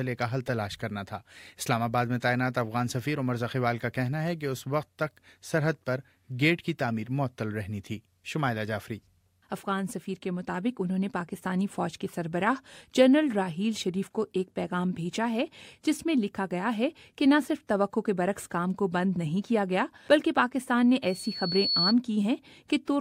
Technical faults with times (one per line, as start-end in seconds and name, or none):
21.02-21.94 loudspeaker feedback squeal